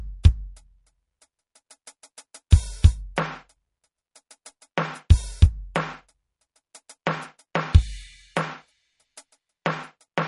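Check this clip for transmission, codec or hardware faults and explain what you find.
Two faults are audible in this music clip.

MP3 compression throughout: treble stops at 11.1 kHz and a plainly audible watery swirl results, likely from an MP3 encoder starved of bits, which fits a low bitrate near 40 kbps.

Pre-echo at 7.06 s: the codec spreads a block's noise into the quiet just before a sharp attack, so a 10 ms hiss precedes the hit and softens it.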